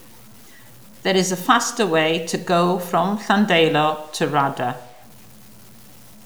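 A speech clip with low bit depth without dither throughout. The voice carries a grainy, buzzy distortion that rises and falls with the sound itself. Quiet syllables and word endings turn gritty, and the softest decays sputter or drop to silence between steps. The error sits only about 30 dB below the speech. The likely cause is samples truncated to very few levels with no dither, which fits 8-bit truncation, so the rounding error tracks the signal instead of becoming steady hiss.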